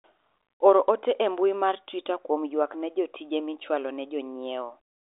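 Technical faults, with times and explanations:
No technical faults detected.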